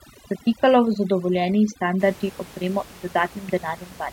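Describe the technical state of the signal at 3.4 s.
At 3.4 s the speech is intact, with only the room's own background noise sitting about 22 dB below it, as is normal for the recording space.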